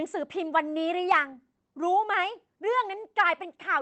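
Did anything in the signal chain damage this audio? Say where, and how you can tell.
Yes. From 1.11 to 1.17 s a loud stretch of the speech turns harsh and crackly, with its peaks flattened instead of rounded. The peaks run about 4 dB past the converter's limit, and roughly one sample in twenty in that stretch is sheared off. This is microphone overload at the converter stage, likely from an input volume set too high, so the analogue-to-digital converter hits its ceiling and squares off the waveform tops.

At 1.12 s, inside that distorted burst, the speech and the background drop together by about 2 dB in a single step rather than a smooth fade. That is the microphone volume stepped down in the call processing stage, likely the software reacting to the clipping by lowering the device's input volume at once.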